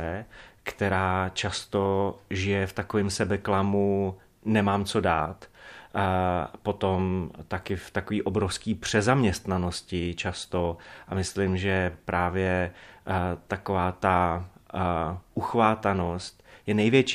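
No technical faults occur at any point in the recording, so there is nothing to describe in time order.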